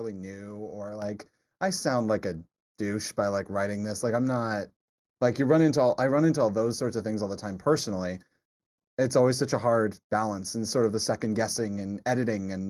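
From the first moment to the end, the speech carries channel delay (comb filtering). One channel arrives roughly a fifth of a millisecond behind the other, and when the two are folded to mono, energy they share cancels at evenly spaced frequencies, the first near 3 kHz. The voice sounds hollow and phasey, lacking presence. On a spectrogram this appears as dark horizontal bands at fixed heights, starting around 3 kHz, that stay put regardless of what is said.

At 1.02 s, right after "new or", the microphone volume is stepped up. The call software judged the input too quiet and raised the device gain in a single jump of about 6 dB, so voice and background noise both become abruptly louder mid-phrase. On a waveform the envelope widens in one clean step, with the noise floor between syllables rising by the same amount. A spectrogram brightens evenly across all frequencies at that instant.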